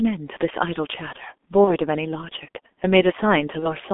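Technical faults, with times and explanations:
throughout, G.723.1 codec: The audio has passed through a low-rate telephony speech codec, and the heavy damage fits G.723.1 at around 6.3 kbit/s. The line is limited to roughly 250 Hz to 3.5 kHz, so the speech sounds muffled and thin. The codec works in coarse 30 ms frames and rebuilds the voice from a slowly updated model, which makes the tone hoarse and smears consonants together.
1.64–1.76 s and 3.59–3.68 s, VoIP packet loss concealed by the speech codec: Each gap fits one lost 30 ms frame. Instead of leaving silence, the decoder repeated its last pitch and spectral shape at falling gain. This produces a brief stretched, buzzy or noisy sound that fades. Because each frame depends on the one before, the voice stays weakened and distorted beyond the lost frame itself, so each affected stretch lasts about 90 to 120 ms.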